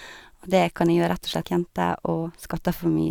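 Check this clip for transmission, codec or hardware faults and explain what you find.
One transmission fault is present. From 1.41 to 1.44 s, a likely stream segment skipped: one chunk failed to load and playback moved on, so the speech jumps ahead with a brief blip.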